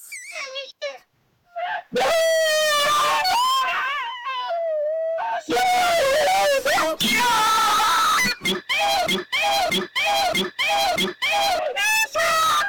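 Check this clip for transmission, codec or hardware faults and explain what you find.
One fault is present.

Broken-record loop, 9.07 to 11.59 s: the player, encoder or stream likely stalled and kept resending the last fragment it held instead of new audio. A 0.63 s slice repeats identically four times, back to back, and whatever should have played during that stretch is lost.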